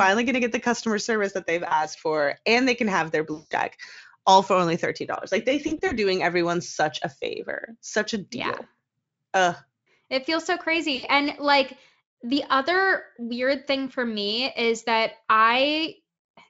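VoIP packet loss concealed by the speech codec occurs four times. At 1.67 to 1.85 s, after "customer service that they've", about 40 ms is lost. At 3.33 to 3.52 s, 180 ms is missing, the longest gap. At 5.67 to 5.94 s, before "doing everyone such a", 100 ms goes in short runs spread over 240 ms. At 10.95 to 11.06 s, after "feels so", 80 ms drops out. Each time the decoder stretches its last pitch and filter with falling gain. The gap becomes a fading buzzy tone or coloured noise, and the speech stays weak for a moment after audio resumes.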